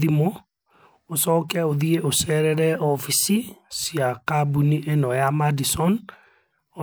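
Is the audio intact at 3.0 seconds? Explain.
No, at 3.0 s there's a drift correction step from 2.76 to 3.38 s. The speech runs 6.2% fast and about a semitone sharp, likely a one-step clock-matching rate jump, then snaps back.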